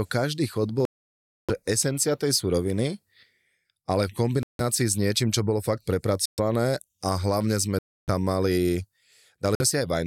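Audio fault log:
0.85–1.50, 4.43–4.61, 6.26–6.39, 7.79–8.09 and 9.55–9.62 s, Bluetooth stall: the speech drops to silence of roughly 634, 162, 123, 292 and 50 ms, then resumes, likely from the headphone buffer running dry while delayed packets were resent; waveform and spectrogram show flat, empty gaps.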